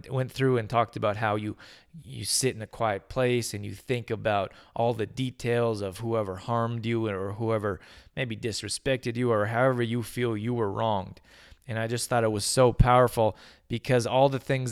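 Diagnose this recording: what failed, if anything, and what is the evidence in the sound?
Nothing failed at any stage in the chain: the speech carries no audible defect and needs no remedial action.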